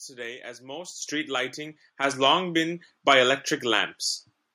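A speech recording in which the microphone volume is stepped up twice: at 1.02 s the whole signal jumps by about 10 dB, and at 2.04 s it rises again by about 5 dB. The call software judged the input too quiet and raised the device's input volume in discrete steps. Unlike a compressor or gradual gain control, each change is instantaneous and permanent, and the background noise jumps up with the speech.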